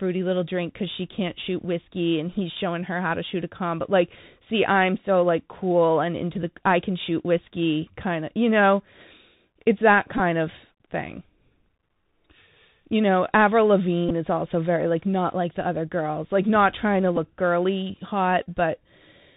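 A speech recording carried over a Bluetooth CVSD headset codec throughout, with plainly audible damage: everything above 4 kHz is gone, a granular hiss sits under the speech, s sounds turn scratchy, and loud high-frequency moments distort where the one-bit delta modulator's adaptive step cannot keep up, consistent with a 64 kbps CVSD link. Bluetooth headset packet repeats, where lost voice packets are replaced by re-decoding the previous packet, cause brief buzzy stutters at 10.17 to 10.20 s between "it's that" and "of thing" (runs up to roughly 15 ms), at 14.09 to 14.11 s before "is also very like", at 17.16 s after "like not trying to", and at 18.43 to 18.46 s.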